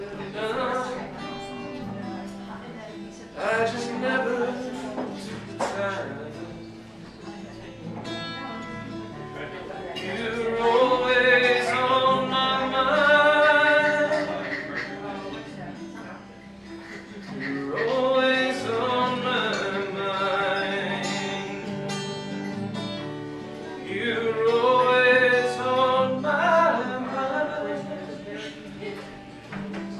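Nothing stood out as a technical fault on listening to the clip.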